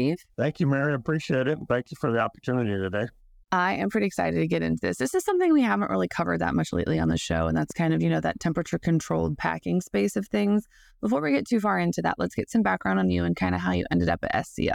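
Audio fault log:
6.94–8.10 s, train of clicks: after "really covered that much", about seven evenly spaced clicks at 5.2 per second, peaking roughly 5 dB above the speech, likely from nearby interference.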